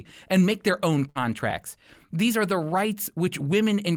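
Right after "and make their own", at about 1.09 to 1.18 s, there's a burst of packet loss. Roughly 57 ms gets papered over by stretching the last sound and fading it, so you hear that sound briefly held before the speech jumps ahead with about 60 ms gone.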